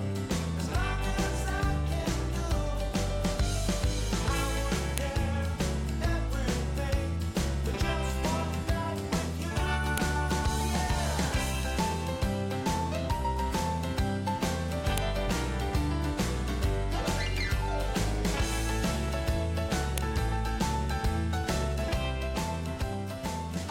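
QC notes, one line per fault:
4.98, 9.98, 14.98 and 19.98 s: file header played as audio. A sharp click marks each 5 s piece boundary, where leftover header bytes play back as samples.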